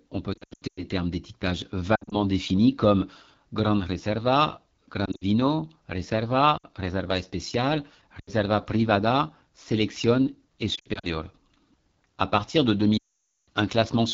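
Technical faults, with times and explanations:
Throughout: AMR wideband (HD Voice) codec at 8.85 kbit/s. This low rate makes the speech rough and raspy, with plainly audible coding damage.
0.33 to 0.84 s, 1.95 to 2.21 s, 5.06 to 5.23 s, 6.57 to 6.65 s, 8.19 to 8.30 s, 10.75 to 11.06 s, 12.97 to 13.48 s: lost AMR speech frames. Gaps fall after "on peut", after "termes d'étiquetage" and after "partir de". The decoder repeats the last good settings with falling gain, so the sound smears briefly, fades quickly and returns rough. The final loss lasts 0.5 s unbroken.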